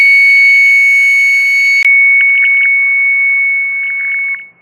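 Throughout the music there is a dull, granular quality with a gurgling edge. The treble thins out and flickers, which points to MP2 compression as the likely cause, at a low rate that fits about 80 kbps. At that rate MPEG Layer II can't give all 32 sub-bands enough bits. Upper bands drop out frame by frame, and the remaining bands are quantised coarsely enough for the damage to be plainly audible.

At 1.83 s the sound breaks off for 20 ms, then comes back boxy and narrow, with nothing above 3 kHz. The level shifts by a few decibels and a faint new noise floor sits well under the music. It stays this way to the end. This is most likely the input switched to a poorer device. The replacement path has a much narrower bandwidth and brings its own level and noise.

From 2.21 to 2.66 s, and again from 3.83 to 4.42 s, short blips of noise in single sub-bands ride over the music. This is DAB burbling. 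A small but steady rate of bit errors gets past error correction into the MP2 frames. Corrupted samples put short noise blips into single sub-bands, and corrupted scale factors, where they get through, make sub-bands jump in level for up to a frame.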